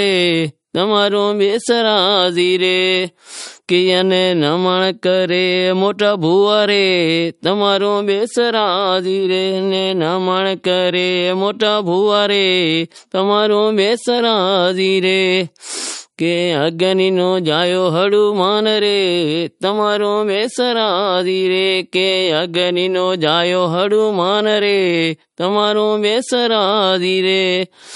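From start to finish, the speech carries plainly audible MP3 compression damage. Nothing sounds above 11.2 kHz, so the treble stops at a hard ceiling. Below it, weak frequency detail flickers in and out from one frame to the next. That gives a watery, swirling texture. The likely cause is an encoder starved of bits, and the damage fits a low bitrate of about 47 kbps. It had to drop the top band and discard quiet detail to fit.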